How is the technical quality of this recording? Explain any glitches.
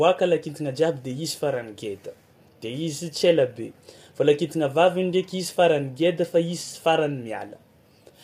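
The recording carries plainly audible coding damage across the whole speech clip, with nothing present above 15.6 kHz. This points to low-delay AAC compression, likely AAC-ELD, at a rate that fits about 32 kbps. Its short frames give coarse frequency resolution, so the encoder cannot cleanly separate the voice's harmonics and spends bits less efficiently. The result is speech that sounds processed and roughened throughout, with the top band cut off sharply at the 15.6 kHz ceiling.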